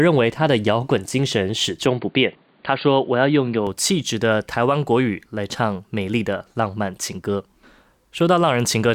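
Speech; from 1.86 to 3.67 s it turns dull, with nothing above 4.7 kHz and a new noise floor roughly 35 dB down. This is likely an input switched to a poorer device, with no gap and no level jump at the switch.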